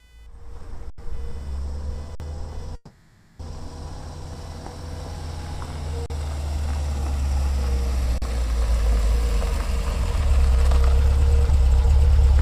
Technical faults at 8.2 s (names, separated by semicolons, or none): computer activity noise; underrun with held sample